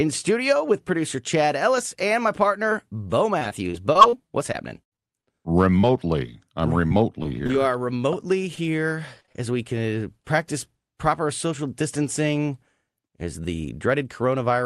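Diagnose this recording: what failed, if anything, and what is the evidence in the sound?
Choppy, robotic stretches at 3.39–4.14 s, 4.52–5.29 s and 9.20–9.36 s, the last just before "as we can uh", point to repeated packet loss on the network. The call path patched each short hole (up to 77 ms) by extending the previous sound.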